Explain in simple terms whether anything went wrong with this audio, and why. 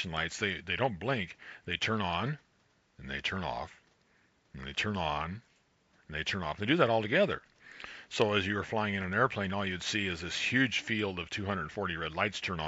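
Nothing went wrong here: the signal holds together steadily the whole way, with no drops, interruptions, or damage to the sound that a listener would notice.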